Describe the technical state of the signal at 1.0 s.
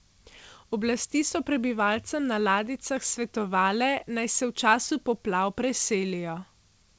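At 1.0 s the speech is intact, with no fault present; it comes through the call path's wideband coding, which leaves nothing above 8 kHz.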